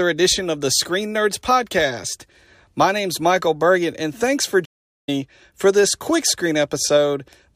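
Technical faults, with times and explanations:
4.65–5.09 s, playback stall: the speech drops to silence for about 0.43 s mid-flow, then carries on, likely because the player ran short of buffered data.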